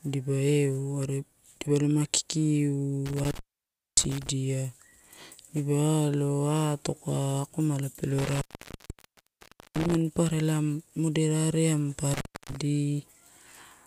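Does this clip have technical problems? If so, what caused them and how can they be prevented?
Yes. The speech drops out three times from intermittent contact: 3.06 to 4.29 s, 8.19 to 9.97 s, and 12.14 to 12.56 s. The gaps last about 0.58 s, 1.35 s and 0.29 s. A loose cable or plug briefly loses its connection. The signal vanishes, and crackle marks each break and return. Faint hiss remains while the line is open. Fit firm, undamaged cables with secure, strain-relieved connectors.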